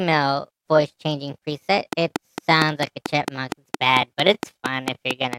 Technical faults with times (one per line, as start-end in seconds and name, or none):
1.93-5.34 train of clicks